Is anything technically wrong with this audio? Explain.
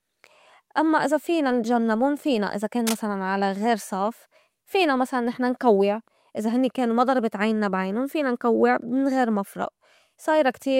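Yes. From 2.86 to 3.02 s, a burst of cable scratch noise lasting about 0.15 s sits over the speech, roughly 10 dB below it. It sounds like a short, coarse scratching or rustling texture, dense and irregular rather than a clean click. The likely cause is a worn cable, connector or control being moved, so its contact resistance fluctuates rapidly and injects uneven noise into the signal path for that moment.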